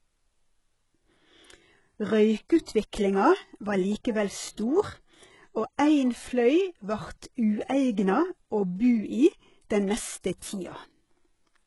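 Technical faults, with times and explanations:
Throughout: HE-AAC compression, heavy. Copied lower bands substitute for real treble, so s sounds turn gritty and lispy. Nothing above 11.5 kHz, likely from a bitrate near 12 kbps.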